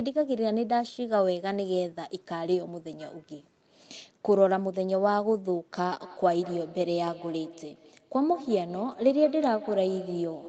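From 6.0 s to the end, feedback echo between two devices: one device's playback re-enters the other's microphone, so speech returns roughly every fifth of a second at about 16 dB down, appearing as evenly spaced, fading copies on the spectrogram.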